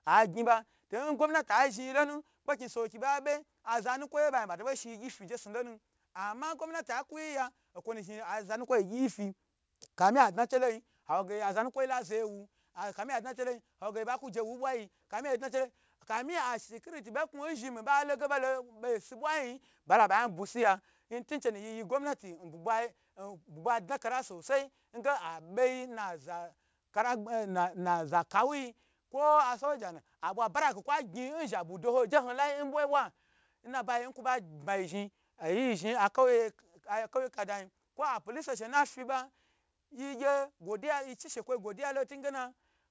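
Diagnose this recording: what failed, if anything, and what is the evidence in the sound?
The fault is aliasing at the sample-rate conversion stage, present for the whole clip. Sibilants sound gritty and metallic, with folded components roughly 25 dB below the speech. This points to a drop from 48 kHz to 16 kHz with no anti-alias filter, so content above 8 kHz reflects back below it as unrelated tones. A spectrogram would show energy running hard up to the 8 kHz edge, with mirrored, inverted sibilant streaks beneath it.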